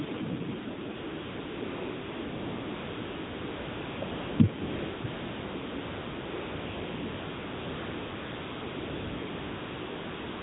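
Throughout, the speech carries the AMR narrowband mobile codec: nothing passes above 4 kHz, and the voice has a buzzy, synthetic edge, which fits a low rate near 7.4 kbps. A spectrogram shows a hard ceiling at 4 kHz with smeared, blocky harmonics.

AMR comfort noise replaces the real background at 0.96–1.62 s, 1.64–4.02 s, 4.04–4.40 s, 4.62–5.04 s and from 5.06 s to the end. Speech frames stopped, and a smooth, steady synthetic hiss switches in. The waveform shows flat, even noise beds.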